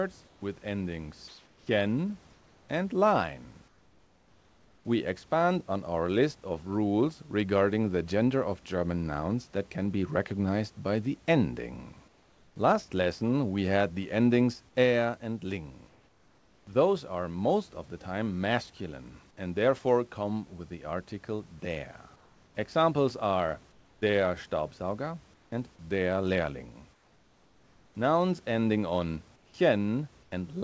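Comfort noise in place of the background appears in the pauses at 0.26 to 4.85 s, 12.08 to 12.56 s (just after "recognized by the ending"), 15.89 to 16.67 s, 22.16 to 24.02 s, 25.34 to 25.52 s (just before "and der"), 26.93 to 27.95 s, and 29.36 to 30.32 s. The likely cause is discontinuous transmission: the sender stops sending when no speech is detected, and the receiver fills the gap with synthetic noise. In these pauses the room's real background gives way to a flat, featureless hiss, about 4 dB quieter where the change is clearest. Unlike a dropout, the pause never goes fully silent. Unlike a noise gate, it is filled with steady noise rather than cut down. Throughout, the call path passes nothing above 8 kHz, which fits G.722 at 64 kbps.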